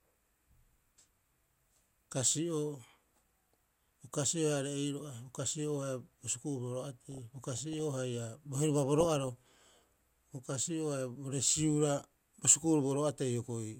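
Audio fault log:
7.12–7.80 s and 9.00–9.88 s, DAB burbling: the speech picks up short blips of noise in single sub-bands. Weak reception is letting a bit error rate of well under one percent slip past error correction, so corrupted samples land in individual sub-bands.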